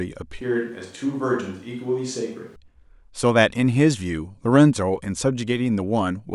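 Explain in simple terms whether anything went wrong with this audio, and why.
From 0.41 to 2.56 s the speech suddenly turns hollow and roomy, a bit quieter, with more background noise, then snaps back. That points to a switch to a distant microphone, likely a backup mic, rather than added echo, which wouldn't bring extra room noise.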